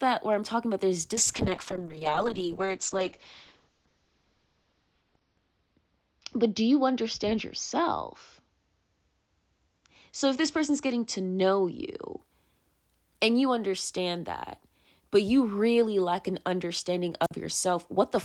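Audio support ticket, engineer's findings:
Call bitrate drop, 1.14 to 12.25 s, right after "I'm talking about there's". Speech goes rough and muffled, top end cut from 20 kHz to 6 kHz, worst for about 3.9 s. Encoder starved by the bandwidth estimate; sounds like roughly 32 falling to 8 kbps.

Wireless microphone squelch dropout, 17.23 to 17.31 s, just after "really lack an understanding". Hiss swells, then a hole of near silence, about 49 ms, before the speech returns. The FM link faded and the receiver's squelch muted the output.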